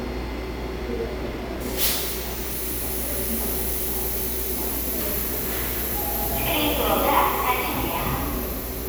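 Nothing here stands out as a technical fault; these sounds come across without any glitch or problem worth flagging.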